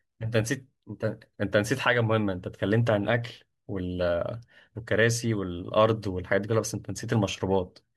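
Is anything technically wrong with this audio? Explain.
No, nothing is technically wrong.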